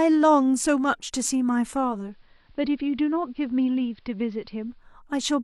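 Digital radio blending to analogue from 1.87 to 4.92 s: the speech cross-fades over 277 ms into the AM broadcast, dropping about 2 dB and picking up faint hiss.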